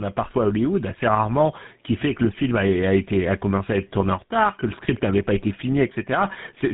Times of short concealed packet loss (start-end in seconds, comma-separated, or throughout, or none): none